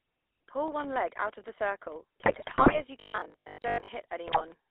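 The whole clip of speech has passed through the GSM full-rate codec, and the damage is plainly audible. The line is squeezed to roughly 300 Hz to 3.6 kHz, so everything is thin and boxy. On top of that, the codec rebuilds the voice from a vocal-tract model driven by a sparse, regularly spaced pulse train. That gives the familiar buzzy, gravelly grit, which fits the 13 kbps full-rate scheme.

From 2.2 to 2.84 s come GSM bit errors. Corrupted bits are reaching the decoder, so the filter, pitch and gain parameters it receives are garbage for a run of consecutive frames. The spectrum gets warped and the level jumps around, and the voice breaks up into squawks, pops and a gargling wobble for well over half a second.

Right after, from 3.0 to 3.9 s, the sound turns into a stiff metallic buzz pinned at 50 Hz, while still loosely tracking the speech underneath. That's most likely audio arriving too infrequently, with the playback side looping the last chunk to fill the gap. 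The 50 Hz pitch fits a 20 ms buffer being repeated, and most of that stretch is replayed material rather than fresh audio.

A second, shorter burst of GSM bit errors hits from 4.26 to 4.45 s. It's milder but the same kind of damage: a brief garbled squelch and pop as a handful of frames decode with bad parameters.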